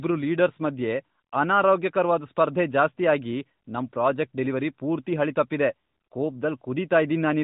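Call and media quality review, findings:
No faults found.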